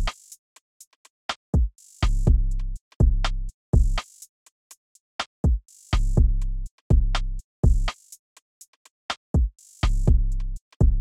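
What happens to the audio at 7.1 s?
Nothing goes wrong at 7.1 s; the audio plays through that moment intact, with no dropout, click, glitch or other fault.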